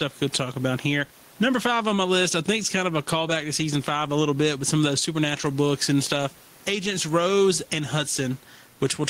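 Gain pumping runs through the whole speech clip. The room noise sits about 38 dB below the speech, and the level moves by something around 10 dB. The likely cause is input gain set far too hot with a fast limiter or compressor clamping down on each peak. Loud and quiet passages come out squeezed together, giving a flattened, squashed sound.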